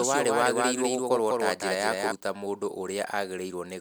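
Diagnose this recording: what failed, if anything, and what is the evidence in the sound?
A doubled audio track runs from the start of the speech to 2.12 s, where the second copy stops abruptly. It trails the original by around 200 ms, some 5 dB quieter, full-band and dry. This is likely a capture-stage routing loop feeding a slower second path.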